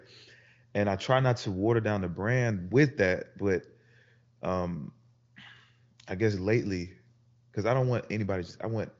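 Speech, with no technical faults to be heard.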